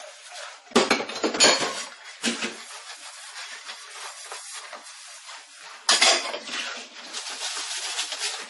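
Transcoding between lossy codecs runs through the whole of this everyday-sound recording, from start to finish: nothing survives above about 11.3 kHz, and layered smearing and swirly artefacts sit together. This is likely from low-bitrate AAC, then Vorbis, then MP3 encoding, each adding its own damage while keeping the lowest cut-off.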